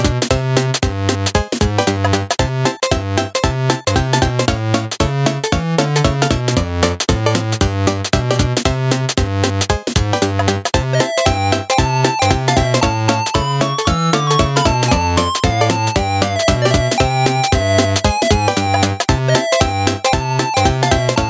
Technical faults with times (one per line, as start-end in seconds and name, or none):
0.00-21.30 gain pumping